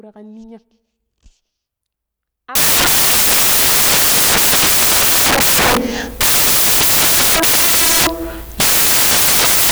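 From 2.55 s to the end, the speech is decoded with samples built from the wrong bytes. The reader assembles each sample's bytes incorrectly, shifted by a byte or in swapped order, so the rapidly fluctuating low-order bits land in the most significant position. The speech is replaced by loud, harsh broadband noise, close to white on the louder sounds.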